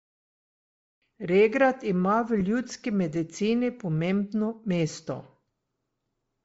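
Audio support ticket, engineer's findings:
Bluetooth LC3 compression likely, across whole speech clip: low-bitrate transform coding, consistent with roughly 32 kbps, zeroes upper spectrum and noise-fills it. Breathy, grainy edge on voice, plainly audible.

Lost LE Audio frames, 2.40–2.42 s: decoder concealed the gap, consistent with two 7.5 ms frames, by reusing the last spectrum with random signs. Brief concealment, about 15 ms.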